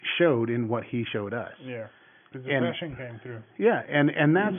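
No technical faults can be heard in the speech, and the only other sound is the room's own background noise, which sits about 45 dB below the voice.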